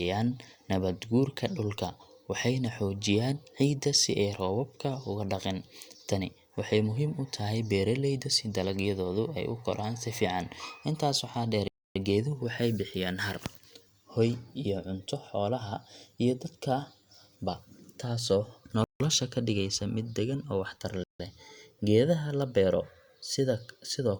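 Speech, cut by three short silences, likely Bluetooth stalls. Delayed packets left the headphone buffer empty. Silence falls for 0.28 s at 11.68 s after "waxaa dheer". It falls for 0.16 s at 18.84 s after "ba taasoo". It falls for 0.16 s again at 21.04 s after "mid deggan oo waxtar".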